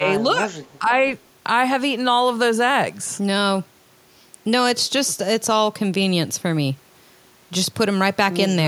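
From 0.0 to 0.07 s, and again between 0.34 and 1.07 s, the speech drops in level, most likely speech suppressed in double talk: an echo canceller mistook the talker for loudspeaker echo and attenuated both. The first dip reaches around 15 dB; the second, about half a second of affected audio in total, reaches roughly 10 dB. The waveform envelope visibly sags, and the spectrogram shows faded, patchy energy across those stretches.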